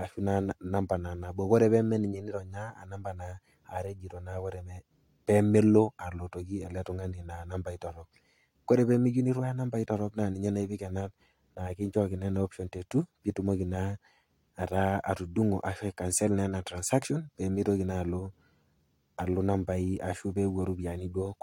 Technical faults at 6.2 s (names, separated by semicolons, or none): none